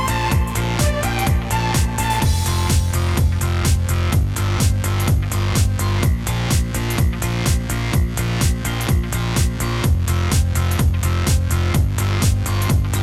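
No technical faults are audible.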